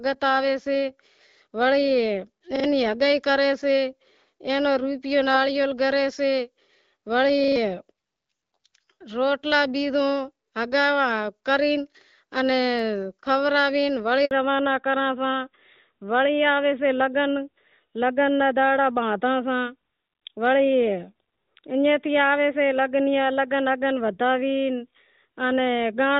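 At 2.56 s there's a repeated buffer, right before "ہگائی کری سے". A tiny slice of the speech plays three times in a row, with a hard edit at each join, up to about 2.64 s. That's a stutter rather than a click, and the repeat length fits a buffer of about 40 ms. Fresh audio didn't turn up in time, so the device replayed what it had, and something like 70 ms of the real speech never got played.

Then at 14.25 s comes a handover gap. The call switches networks, no speech frames get through during the switch, and the voice fades out almost instantly into about 60 ms of silence until 14.31 s. Whatever was said in that window is simply gone, not muffled or smeared.

From 14.31 s to the end, the call has fallen back to narrowband. Up to then it's HD Voice, which sounds like AMR wideband at around 12.65 kbit/s, so the speech is clear with only light codec roughness. After the handover, nothing above 4 kHz comes through, and the speech goes duller and a bit grittier. 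That sound points to AMR narrowband at about 12.2 kbit/s, and it's easiest to hear on s and t sounds, which lose their crispness.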